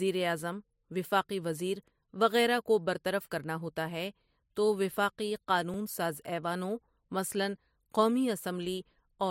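At 5.74 to 5.76 s there is a repeated buffer. A 20 ms piece plays twice with a hard join, heard as a brief stutter or click.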